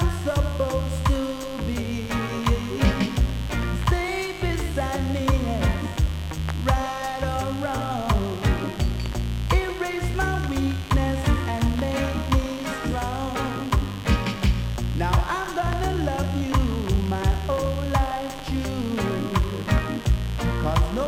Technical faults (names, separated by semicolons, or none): mains buzz